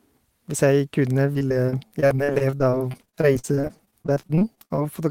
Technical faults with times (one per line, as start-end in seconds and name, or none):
1.33-4.82 repeated packet loss (robotic sound)